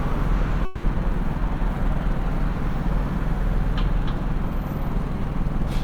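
From 0.65 to 0.85 s the sound gives way to a synthetic buzz that decays, with no true silence, and resumes with about 180 ms missing, likely a long network dropout. On a spectrogram, smeared, repeating bands fade before abruptly restored detail.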